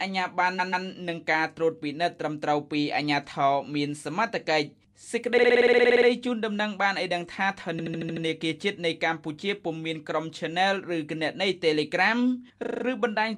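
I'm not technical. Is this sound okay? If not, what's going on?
No. The audio has repeated frames: a short stretch gets replayed several times in a row, so it stutters like a skipping CD. It happens at 0.58 s (a 0.14 s piece played twice more), 5.37 s (a 0.05 s piece repeated twelve extra times), 7.79 s (0.09 s, six extra times) and 12.63 s (0.03 s, five extra times). Unlike a dropout, nothing goes missing. The recording just gets longer.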